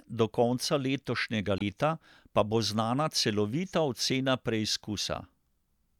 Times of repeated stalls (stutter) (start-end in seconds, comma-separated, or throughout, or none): none